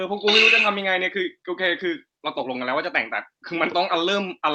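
No technical faults are audible.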